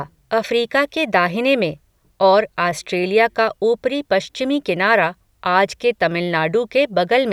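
Nothing goes wrong anywhere in this speech recording, so there's no fault to walk through.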